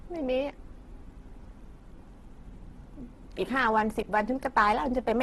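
Throughout, the speech sounds grainy, rough and noisy, with nothing above 12.1 kHz. The likely cause is heavy Opus compression at a very low bitrate, around 12 kbps.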